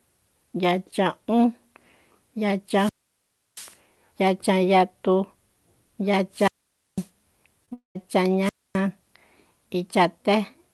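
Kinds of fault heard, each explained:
Wireless microphone squelch dropout: The analogue FM link from the microphone loses enough signal strength that the receiver's squelch gate mutes its output rather than pass raw static. Three occur: 2.68 to 3.77 s, 6.31 to 7.09 s and 8.42 to 8.79 s. Each begins with a rise of hiss, then opens a hole of near silence of about 680 ms, 500 ms and 260 ms respectively, before the signal recovers and the speech returns.
Short concealed packet loss: Two back-to-back gaps of about 20 ms each, at 7.65 s and 7.69 s, where packets missed their playout deadline. The decoder synthesised replacement audio by extending the preceding sound, then cross-faded into the real signal. This is heard as a brief smear or wobble in the speech rather than a clean cut. It leads directly into the longer interruption that follows.
Long network dropout: From 7.73 to 7.97 s about 220 ms of audio never arrives, likely because the network delivered nothing over that stretch. 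The receiver first carries the last sound forward as a synthetic tail that decays. That leaves around 130 ms of silence before the stream resumes further along, with the missing segment simply absent. Together with the two short losses just before it, this forms a cluster of about a third of a second of damaged audio.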